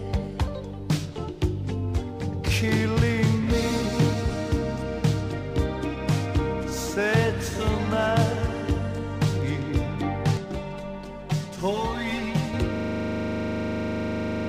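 From 10.37 to 12.54 s, channel delay causes comb filtering. One channel runs roughly 5 ms behind the other. When the two are summed to mono, the shared content cancels at evenly spaced frequencies. The first notch sits near 100 Hz, and further notches repeat up the spectrum every 200 Hz. The sound turns hollow and phasey, and the tone takes on a fixed, boxy colour.

At 12.76 s a system hang loop takes over and lasts to the end. The machine stalled, but the audio hardware kept replaying its ring buffer. A single 40 ms slice repeats over forty times. That loop rate of 25 Hz is too slow to fuse into a buzz. Instead it comes across as a rapid machine-gun stutter, the same fragment hammering on with nothing new coming through.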